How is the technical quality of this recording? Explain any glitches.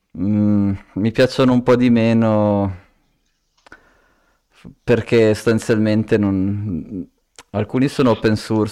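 Technical quality is compromised by three bursts of hard clipping in this speech. They run from 1.19 to 2.52 s, 4.90 to 6.27 s and 7.76 to 8.61 s. In each, the signal was driven past what a stage in the chain could pass, by about 8 dB in the first burst and about 5 dB in the other two. The peaks were sliced flat, and those squared-off tops add harmonics high in the spectrum. The speech turns harshly fuzzy on loud parts, roughest in the first burst.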